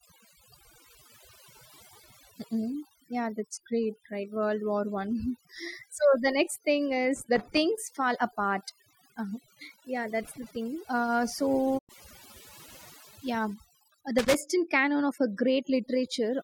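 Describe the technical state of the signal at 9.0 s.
At 9.0 s you're hearing overdone noise removal, present across the whole clip: bands near the noise floor get gated out, leaving twinkly near-silence and the quiet parts of the voice cut away with them.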